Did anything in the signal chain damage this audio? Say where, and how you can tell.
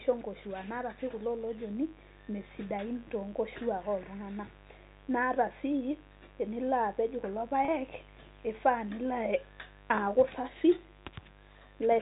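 Yes. A steady, raspy buzz runs under the speech for the whole clip, sitting around 25 dB below it. That is mains buzz entering at the analogue wiring stage. The buzz is built on 50 Hz harmonics reaching well up the spectrum, which points to sharp switching spikes from a dimmer, rectifier or poorly shielded cable rather than a smooth hum. The spikes arrive twice per mains cycle.

Just after "tenilo apej kulo", from 7.65 to 7.68 s, the sound briefly holds a buzzy, sustained tone instead of moving on naturally. This is packet loss with pitch repetition at the network stage. About 30 ms of audio went missing, which fits a single lost packet. The receiver filled the gap by repeating the last pitch period, and because the gap is so short, it comes through as a slightly held note rather than a fade into silence.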